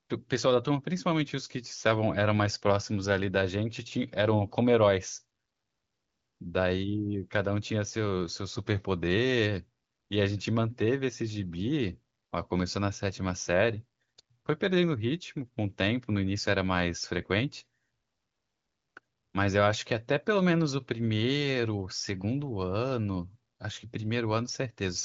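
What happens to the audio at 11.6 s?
Nothing goes wrong at 11.6 s. The speech carries straight through, with the AMR wideband (HD Voice) codec working normally and the usual top cutoff near 7.5 kHz.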